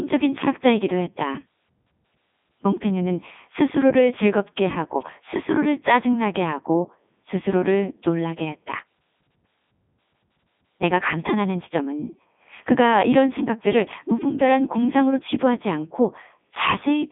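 Throughout, the speech passes through a Codec 2 vocoder, which fits its 3.2 kbit/s mode. It is rebuilt from sine waves, so it sounds robotic and buzzy, with nothing above 3.8 kHz.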